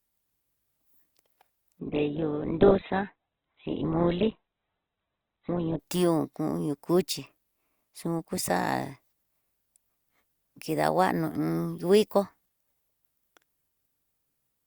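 An adaptive stream at a lower bitrate runs from 1.79 to 5.79 s in this speech clip, ending just before "tión kuño cuchi". When the connection slowed, the player switched to a much leaner encoding. The shift from full-band sound to a dull tone points to an Opus stream dropping from around 64 kbit/s to about 8 kbit/s. Nothing above 4.2 kHz survives, and the quality changes abruptly in both directions without any gap.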